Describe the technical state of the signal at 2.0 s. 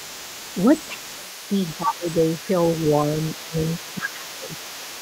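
At 2.0 s the speech sits inside a dip from 1.78 to 2.06 s, sinking as much as about 20 dB. This is speech suppressed in double talk, likely an echo canceller ducking the talker while the far end was also speaking.

A faint second voice, the other side's voice leaking through, runs under the speech here and across the whole clip, roughly 20 dB below it. This is likely far-end loudspeaker sound that the echo canceller left in the microphone signal.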